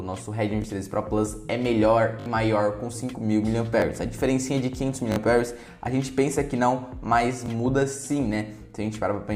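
Repeated buffers occur at 0.62–0.64, 2.2–2.26, 3.8–3.82, 5.12–5.16 and 7.46–7.48 s. Audio arrived late, so the last block played again. Each repeat spans 20 ms, fitting a 20 ms buffer. Hard joins make brief buzzy stutters. The 2.2 s one loops three extra times.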